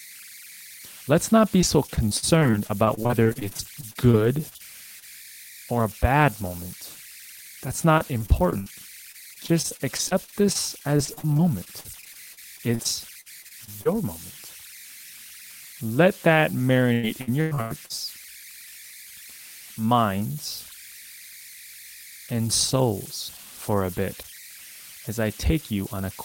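Converter idle tones run through the whole speech clip. A whistle sits near 2 kHz, about 20 dB below the signal. It is clearest in the pauses. Under quiet passages it turns into a grainy hiss. The converter was working without dither. With a small input, its bit pattern settled into a repeating cycle, and that cycle became an audible tone.

From 1.61 to 4.62 s there is repeated packet loss, heard as robotic sound. Short holes arrive one after another, the longest about 58 ms. Roughly a sixth of the stretch is patched. Each gap was filled by extending the last sound before the next one hit. The result is choppy and broken.

At 5.00 s comes a short concealed packet loss. About 20 ms never arrived. The receiver carried the previous sound forward and blended back in. It is heard as a brief smear or wobble.

Repeated packet loss returns from 7.98 to 8.68 s. The longest gap there is about 62 ms, with a fifth of the span patched. 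It returns again from 9.12 to 13.87 s, with gaps up to about 52 ms. The worst stretch runs from 16.93 to 17.92 s. There, gaps reach about 101 ms and over 40 percent is filled.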